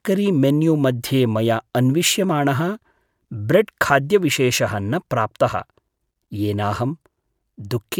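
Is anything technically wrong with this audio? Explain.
No, nothing technically wrong can be heard here.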